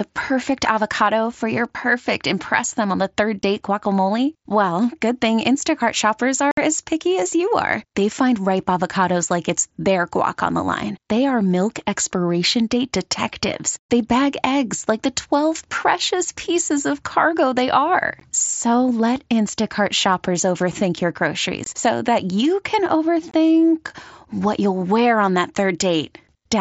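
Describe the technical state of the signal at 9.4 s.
At 9.4 s the speech is intact, carried through the Bluetooth mSBC headset codec path with only its usual light wideband coding and no fault at that moment.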